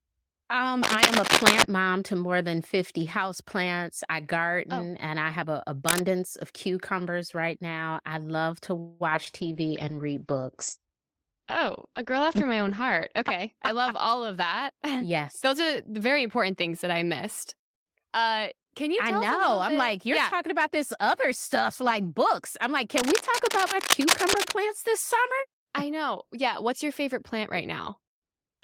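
At 0.83 s a burst of cable scratch noise starts and runs to 1.63 s, sitting roughly 5 dB above the speech. It is dense, uneven crackle and rustle laid over the talker, most likely from a worn cable or connector being moved so that its contact resistance jumps around rapidly. A second, shorter burst of the same cable scratch noise appears at 5.87–6.03 s, at about the level of the speech itself, and is heard as a quick scrape.

From 8.79 to 9.02 s there is a call audio freeze. The likely cause is packets held up in transit, so that the jitter buffer ran dry. For about 208 ms the receiver carries the last sound forward as a fading buzz rather than dropping to silence. When the stream resumes, the speech picks up where it stopped, with nothing lost. The net effect is a gap inserted into the flow and about 208 ms of added delay.

Two instances of short concealed packet loss follow closely, at 9.10 s and 9.25 s. 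Each leaves about 20 ms of audio that never arrived. The decoder patches it by extending the preceding sound and then blending back into the real signal. Each is heard as a brief smear or wobble in the speech.

A call bitrate drop begins at 9.41 s and lasts until 14.24 s. The encoder falls from 32 to 12 kbps and holds the lowest rate for about 3.8 s. Audio bandwidth shrinks from 20 kHz to 8 kHz over the same stretch, so the speech loses its top end and turns muffled, with a rougher, watery texture from the coarser coding. It brightens again as the rate recovers.

Overlapping the end of that stretch, a jitter buffer speed-up runs from 13.21 to 16.01 s. The receiver trims the backlog by repeatedly cutting out short pitch-period segments, about a fifth of a second in total. Playback runs at about 107% of normal speed with the pitch unchanged, so the delivery sounds slightly hurried.

The longest episode of cable scratch noise occurs at 22.97–24.52 s, at about the level of the speech. 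It is the same irregular scratching texture as before, persisting for roughly a second and a half.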